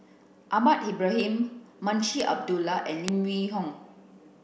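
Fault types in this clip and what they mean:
Bit error spike: A single flipped bit in the digital data throws one sample, or a short run of them, far off its true value for an instant before it snaps back. In this speech clip it shows as three sharp ticks, at 1.20 s, 2.20 s and 3.08 s. The first spans three samples and peaks at about -23 dBFS. The later two are single samples, much louder, at about -11 and -5 dBFS. Each tick is broadband and unrelated to the speech.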